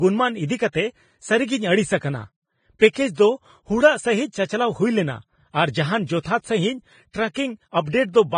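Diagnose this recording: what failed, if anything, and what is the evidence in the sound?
The failure is at the codec stage. The speech carries hiss and a grainy texture throughout, with tones roughened and consonant attacks blurred. Nothing is present above 9.7 kHz. That hard ceiling and the heavy treble damage point to low-quality Vorbis compression, likely at a bitrate around 21 kbps. The encoder quantised the upper residue so coarsely that detail became noise. On a spectrogram, the band stops flat at 9.7 kHz, and below it the harmonics look speckled and patchy.

Pre-echo, from the same codec, appears at four attacks: 1.97 to 2.02 s (spreading 41 ms), 2.79 to 2.81 s (23 ms), 2.93 to 2.95 s (26 ms) and 6.23 to 6.25 s (25 ms). In each case a short hiss runs ahead of a sharp onset, and the attack sounds softened. Quantisation noise sized for the loud transient was spread across the whole transform block, including the quiet moment before it. 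On a spectrogram this shows as a faint broadband smear preceding each onset. On the waveform, low-level noise rises before the transient.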